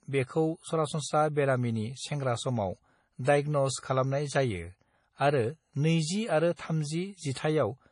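From start to end, the speech has nothing above 10.5 kHz and heavy swirling, watery artefacts, with metallic chirps on s sounds and smeared onsets. This is likely MP3 compression at a low bitrate, which fits about 32 kbps, zeroing weak spectral lines frame by frame.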